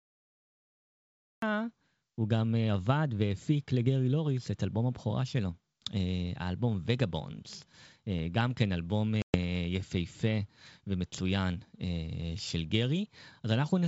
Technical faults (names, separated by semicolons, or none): cut-off start; packet loss on an ADPCM call